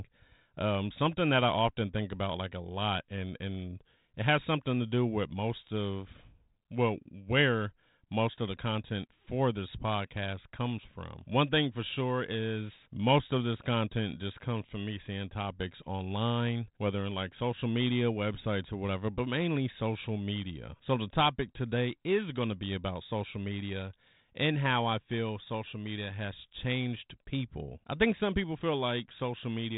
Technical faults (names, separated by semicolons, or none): none